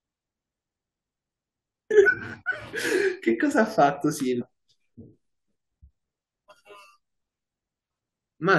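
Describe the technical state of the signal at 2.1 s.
Right around 2.06 s there's a quick glitch from damaged data in the compressed stream: corrupted bytes throw the decoder off sync until it finds the next frame header.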